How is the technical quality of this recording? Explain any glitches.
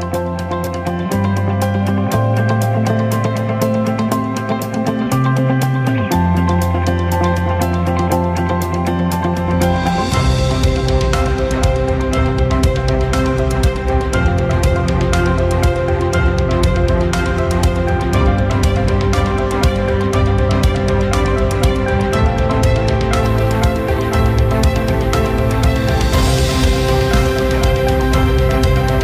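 A clean start gives way to a clear glitch in the final stretch. From 23.23 s to the end, there is crude rate conversion. The audio appears to have been stepped up by a ratio of about 1.38 by simply repeating the nearest sample, with no filtering. That points to a 32 kHz source converted to 44.1 kHz. The repeated samples leave a regular error, very roughly 25 dB below the signal. It is heard as a gritty, inharmonic fizz that rides on the louder and brighter sounds.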